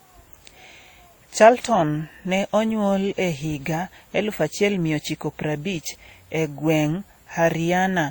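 From start to finish the speech carries two layers of codec artefacts at once, heard together, with nothing above 20.2 kHz. That's transcoding between lossy codecs, likely something like a 48 kbit/s WMA encode re-encoded to Opus at a similar rate.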